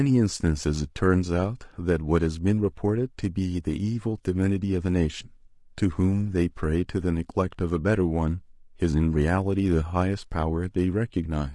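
Low-delay AAC compression runs throughout this speech clip: the voice sounds rough and grainy, likely from AAC-ELD's short frames smearing pitch harmonics at a rate fitting 32 kbps.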